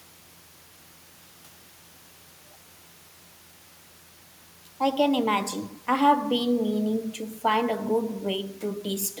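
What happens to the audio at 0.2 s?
Nothing goes wrong at 0.2 s: the audio is intact at that point, with no dropout, click, distortion or other fault.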